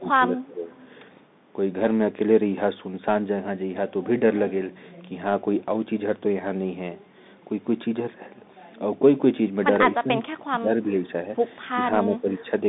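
The whole clip runs through the Bluetooth CVSD headset codec, the narrowband headset link with its one-bit, 64 kbit/s delta stream. Nothing gets past about 3.8 kHz, so the speech sounds boxed in. The step size can't keep up on sharp, bright sounds, so sibilants go gritty, and a fine granular hiss sits under everything.

From 0.00 to 0.72 s the speech sags by up to about 15 dB. It's most likely speech suppressed in double talk: the echo canceller got confused with both ends talking and ducked the near talker.

Right after, from 0.71 to 0.87 s, there's a faint echo leak. A delayed copy of the speech, about 281 ms late and around 30 dB down, slips back through, likely from a speakerphone that didn't cancel all of its own pickup.

The double-talk suppression comes back toward the end, at 9.98 to 10.25 s, 10.44 to 10.94 s, 11.73 to 11.82 s and 12.04 to 12.51 s. Each time the speech briefly dips by roughly 10 to 15 dB. 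The call microphone processing's bass roll-off is just the normal high-pass, not a fault.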